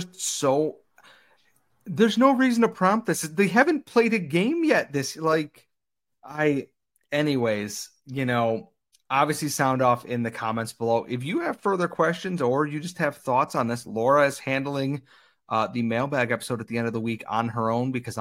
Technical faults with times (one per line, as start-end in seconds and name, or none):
none